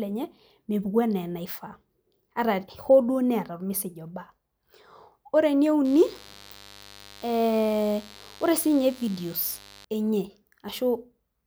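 Speech carries a mains buzz from 5.85 s to 9.85 s, sitting roughly 25 dB below the speech: sharp switching spikes twice per 50 Hz cycle leak in, likely through a dimmer or poor shielding. A spectrogram shows evenly stacked 50 Hz harmonic lines into the kilohertz range, and the waveform shows a 100 Hz spike train.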